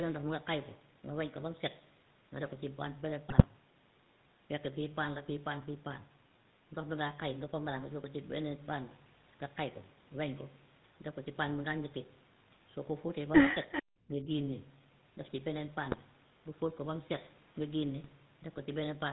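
The whole clip has that buzzy, gravelly GSM full-rate codec roughness. The coder models the vocal tract and drives it with a thinned-out pulse excitation, so the speech gets a grainy edge and loses everything above 4 kHz. That fits the 13 kbps full-rate coder.

At 3.29 to 3.46 s you hit the first burst of GSM bit errors. Corrupted filter, pitch and gain values reached the decoder, so for a few frames the spectrum bends and the level jumps, giving squawky, gargling pops. The same thing comes back, shorter, at 15.92 to 16.0 s.

Around 13.72 to 13.83 s there's a faint echo leak, a scrap of delayed copy trailing about 0.39 s behind and sitting roughly 15 dB down. It's most likely a loudspeaker on one end whose echo canceller didn't scrub out everything its mic picked up.

Right after, at 14.08 to 14.28 s, the speech is suppressed in double talk. It dips by around 5 dB for a bit over a tenth of a second. 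This is likely the canceller getting confused with both sides talking and turning down its own talker along with the echo.

The last GSM bit errors land at 18.00 to 18.13 s, with another short run of squawky, garbled frames as bad parameter values get decoded.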